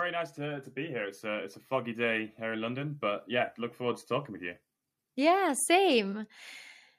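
From 0.35 to 4.09 s, automatic gain rising lifts voice and background together by about 7 dB. The control judged the input too quiet. It settles before "with you".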